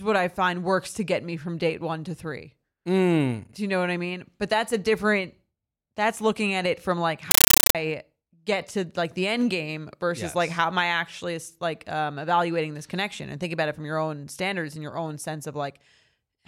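Speech, with a burst of compressed stream played as audio from 7.31 to 7.75 s, where the sound gives way to loud, chattering static. That's a Dolby Digital (AC-3) bitstream being treated as plain PCM samples instead of being decoded. Each frame comes out as a noise burst about 9.3 ms long followed by silent padding, repeating at 31.25 per second, which gives it that rhythmic chatter. The density points to a 448 kbps stream.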